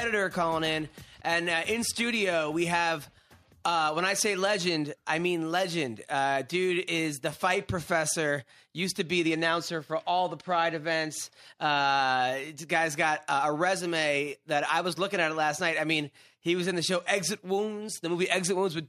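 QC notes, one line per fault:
Nothing to flag here; I listened all the way through and didn't hear a single problem worth noting.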